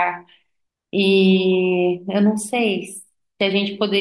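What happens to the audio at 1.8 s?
Nothing goes wrong at 1.8 s; the speech runs through that moment intact, with no dropout, click or distortion.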